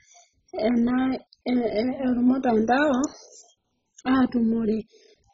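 Throughout the speech there is heavy MP2 compression damage, likely from encoding with MPEG Layer II at a very low bitrate, around 16 kbps. The coder divides the spectrum into 32 sub-bands and, short of bits, shuts off the upper ones entirely, so nothing is left above 7.5 kHz and the sound is dull. The bands still carried are coarsely quantised and flick in and out, giving a gurgling, granular roughness over the whole clip.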